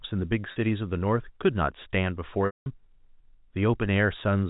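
Speech over G.711 telephone coding has two glitches. At 0.52 s it briefly holds on a slightly buzzy tone for 40 ms. From 2.46 to 2.66 s, a 200 ms dropout begins with a buzz that fades to silence before the speech cross-fades back. Both are packet loss with pitch repetition: the receiver repeats the last pitch period to bridge the missing data. The gaps fit about two and ten 20 ms packets.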